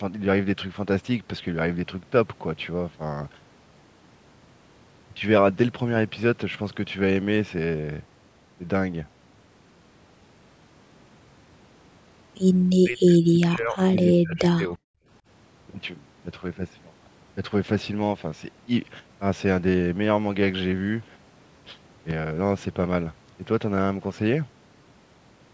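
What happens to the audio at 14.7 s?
At 14.7 s the speech is near the end of a stretch from 12.8 to 14.79 s in which it is pushed down by up to about 40 dB, dipping, losing its high end or cutting out in pieces. This is speech suppressed in double talk: with both sides talking, the echo canceller likely mistook the talker for loudspeaker echo and cut it.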